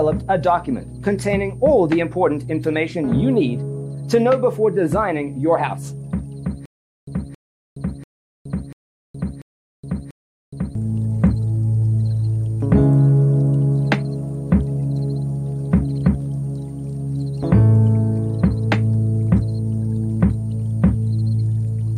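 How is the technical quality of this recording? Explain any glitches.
The recording has two faults: a steady high whistle and a stutter in the middle.

A switching supply whistle runs the whole length: a thin tone wandering between about 8.64 and 9.17 kHz, sitting roughly 40 dB below the sound. It comes from a switching power supply operating in an audible burst mode or beating with another one, its frequency shifting as the load changes. Unlike a fixed-frequency electrical hum, the pitch drifts, and it is far higher than mains buzz and its harmonics.

From 6.66 s to 10.75 s there is a stutter with silent gaps. A 0.27 s burst plays, then about 0.42 s of dead digital silence follows, repeating every 0.69 s, six times. The likely cause is a stalled player or stream that replays its last fragment on each retry and then runs dry, so the audio belonging to those four seconds is lost. The perfectly regular pace and true silence between bursts separate it from random dropouts or packet-loss concealment.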